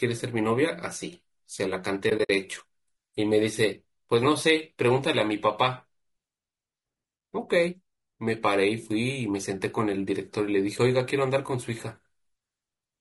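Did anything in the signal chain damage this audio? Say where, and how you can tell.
Yes, at the codec stage. Throughout the speech the voice sounds rough and grainy, with noise filling the gaps between harmonics and a thin, somewhat synthetic top band. The likely cause is low-delay AAC compression such as AAC-ELD at a bitrate around 32 kbps. It codes about 500 frequency lines a frame with a low-delay window, and at this low bitrate the bits run short. Unlike a plain low-pass or narrowband limit, the damage is graininess inside the band, not just missing treble.

The second fault is in the network-to-decoder path. Between 2.09 and 2.3 s the sound drops out in several soft-edged holes, about 100 ms of silence scattered over 200 ms, with the longest gap around 70 ms. This fits AAC frame loss with muting, roughly five lost frames that the decoder zeroed. Overlapping windows fade each hole out and in, which sets it apart from a buffer underrun's hard cut.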